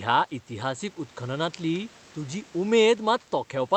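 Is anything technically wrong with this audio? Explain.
No, nothing in this speech clip points to a technical fault. It has passed through a normal WebRTC call path, with the top end rolled off at about 8 kHz as expected from an Opus call codec, and faint room noise sits about 30 dB below the speech.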